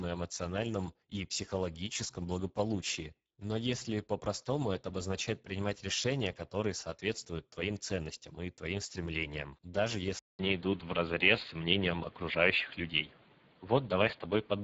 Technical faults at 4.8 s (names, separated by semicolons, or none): Speex codec